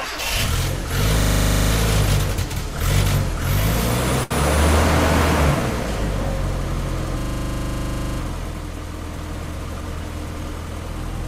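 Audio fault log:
1.2–1.72 s and 7.19–8.19 s, system hang loop: the system froze while the audio hardware kept replaying one 40 ms slice of its ring buffer, 13 times and then 25 times. The exact repetition at 25 Hz sounds like a rapid mechanical stutter, and the audio then picks up with nothing apparently lost.
4.23–4.34 s, short stall from a late packet: a packet arrived late and the jitter buffer ran dry, so the receiver stretched the last sound for 71 ms until it came in. The sound hangs on too long, then continues from where it stopped, 71 ms later than before.
9.17–9.96 s, jitter buffer speed-up: the jitter buffer was holding more audio than its target, so the receiver cut out a series of tiny pieces, roughly 50 ms in total. The passage runs at 105% speed with unchanged pitch, sounding slightly hurried.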